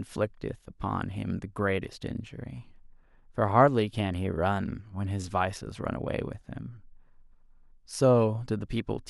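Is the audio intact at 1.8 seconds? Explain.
Yes, the speech at 1.8 seconds is intact, with no dropout, click, distortion or other fault at that moment.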